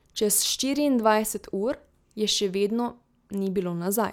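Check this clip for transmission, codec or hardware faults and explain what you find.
The speech signal holds steady throughout, with nothing in transmission, encoding or the playback hardware audibly disturbing it.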